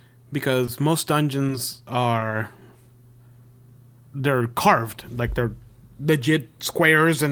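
At 0.65 to 0.82 s, a short stall from a late packet: the jitter buffer ran dry, so about 20 ms of sound is held, with a slight buzz or dip, before playback resumes. At 2.19 to 2.23 s, a short concealed packet loss: 20 ms never arrived and was synthesised from the preceding audio, leaving a brief smear.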